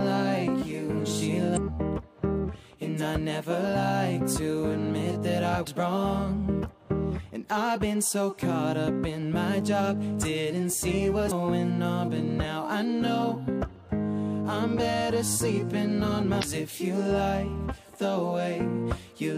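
Four brief blips from damaged data in a compressed stream occur at 1.53–1.58 s, 5.63–5.68 s, 11.3 s and 16.39–16.44 s. Corrupted bytes make the decoder misread frames, lose sync and search for the next header, so the audio breaks briefly.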